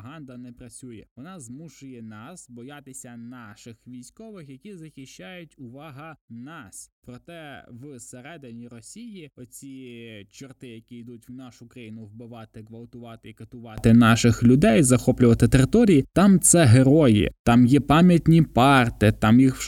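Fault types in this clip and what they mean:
One channel inverted: Until 13.78 s, just before "наших людей захоплювати території", the speech is about 25 dB quieter. The likely cause is one reversed-polarity channel cancelling the other in mono.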